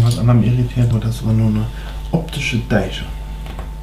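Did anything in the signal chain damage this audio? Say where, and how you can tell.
Yes, it's at the codec stage, where compressed frames were skipped. At 0.91 s and again at 2.13 s the sound jumps forward instead of flowing on. The first jump loses about a tenth of a second and the second about 70 ms, which fits several whole frames and then a few more going missing or being rejected by the decoder.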